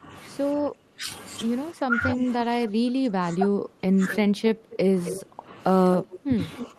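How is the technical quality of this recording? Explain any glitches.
Not great. The speech is pulled down for most of the recording, and there's a delayed echo in several spots.

From 0.0 to 1.09 s (roughly 0.7 s of that affected), and again from 1.73 s to the end, you get speech suppressed in double talk. The level drops by up to around 15 dB. It's likely an echo canceller that couldn't tell this talker from the far end's loudspeaker echo, so it ducked everything.

Echo leak shows up at 2.09–2.14 s and 4.11–4.17 s, roughly 15 dB under the speech, and louder, about 10 dB under, at 4.72–5.22 s and 5.99–6.67 s. It's a copy of the voice trailing 265 ms behind. That's likely a speakerphone on one end whose canceller let some of its microphone pickup slip back down the line.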